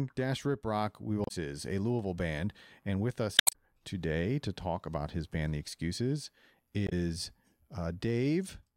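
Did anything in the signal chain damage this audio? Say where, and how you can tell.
Yes. Damaged data in a compressed stream shows up at 1.24 to 1.31 s, 3.36 to 3.55 s and 6.86 to 6.92 s, each a brief squawk or blip that breaks the sound. The damage sits at the codec stage: corrupted bytes in the encoded file or stream made the decoder misread those frames and lose sync, producing garbage until it found the next valid frame header. The middle burst is the longest of the three.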